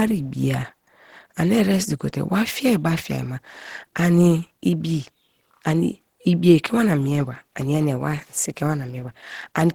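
From start to finish the speech sounds hoarse, rough and grainy, with plainly audible damage even though the top end reaches about 20.2 kHz. This is likely Opus compression in its hybrid speech mode, at a low bitrate that fits about 16 kbps.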